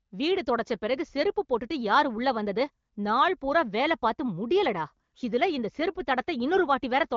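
No faults found in the speech; the band stops near 7.2 kHz and the light coding texture fits an AMR wideband (HD Voice) codec at one of its higher rates, as expected for that path.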